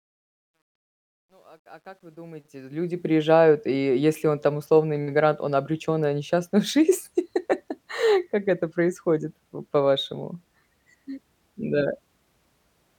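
Speech opens with a fade-in from the very start to about 3.17 s that shows truncation distortion on a fade. The gain stage keeps too few bits, consistent with an 11-bit path, and adds no dither. From 0.0 to 2.28 s the quietest part turns gritty. The fade cleans up just before "и е если он".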